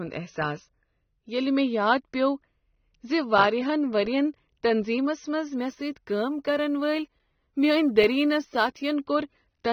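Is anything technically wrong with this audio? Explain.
Yes. Throughout, the speech is band-limited, with nothing above 6.3 kHz, and sounds dull and smeared; this is likely AAC compression at a low bitrate, discarding high bands.

From 5.58 to 8.94 s, sample clock jitter adds a roughness about 35 dB below the speech: timing wobble of a few microseconds causes errors that grow on steep, loud waveform slopes.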